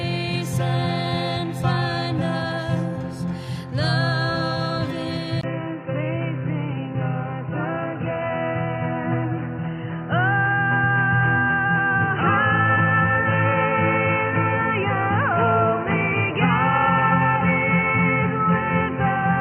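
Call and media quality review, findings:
Input switched to a poorer device at 5.41 s, holding to the end. Brief 20 ms gap, then dull, boxy sound, nothing above 3 kHz, level unchanged. Spectrogram: hard ceiling at 3 kHz, new noise floor roughly 30 dB down. Likely a headset call profile.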